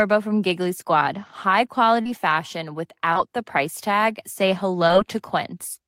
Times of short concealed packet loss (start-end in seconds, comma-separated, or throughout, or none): 2.01-2.07, 3.13-3.17, 4.87-4.91